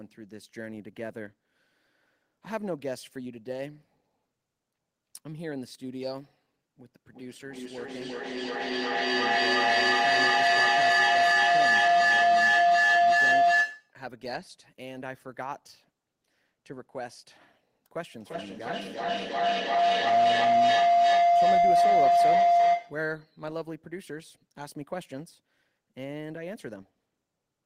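Feedback howl from 7.07 to 13.99 s and 18.18 to 23.14 s: a loudspeaker-to-microphone loop builds a tone near 700 Hz, pulsing about every third of a second, peaking about 13 dB above the speech. Unlike echo, the repeats grow rather than fade.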